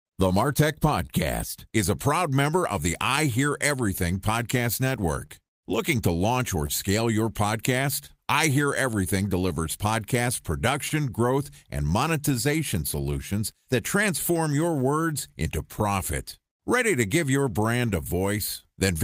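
A speech recording carrying a steady clock drift between sender and receiver: the sender's clock runs about 1.5 percent slow, so the receiver's jitter buffer keeps draining. On a spectrogram this shows up indirectly, as syllables that land a little later than a steady tempo would place them, and as faint vertical seams where material has been stitched in. The drift drives repeated timing corrections from 0.28 s to 17.87 s. To keep pace with the slow source, the receiver repeats short pieces, all in the same direction and unevenly spaced, adding roughly a tenth of a second in total. By ear this is a slightly uneven rhythm or an occasional tiny hiccup. In the waveform each repeat appears as a few duplicated cycles with a small discontinuity at the joins. At 1.06 to 1.11 s there is a short stall from a late packet: the buffer ran empty, so the receiver held the last sound for 28 ms until the packet arrived, and nothing was lost. 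A spectrogram shows this as a horizontally smeared, frozen slice with flattened harmonics, while the waveform shows a repeated, slightly buzzy stretch, perhaps with a small dip in level. Scattered short gaps follow. About seven fall between 3.16 and 12.32 s, with roughly 100 ms concealed in all and the longest near 30 ms. About four more fall between 15.79 and 18.63 s, concealing around 40 ms with none longer than about 15 ms. Each hole was filled by extending the preceding sound, and no audio is actually missing. On a spectrogram each patch appears as a thin vertical band where the spectral detail smears or stops evolving, and in the waveform as a brief repeated segment. To the ear these are brief ticks or smears.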